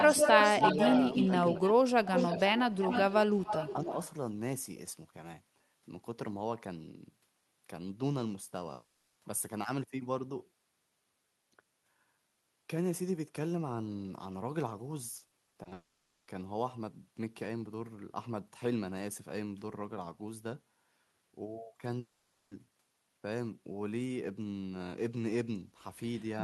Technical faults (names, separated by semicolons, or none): echo leak; speech suppressed in double talk; long network dropout; repeated packet loss (robotic sound)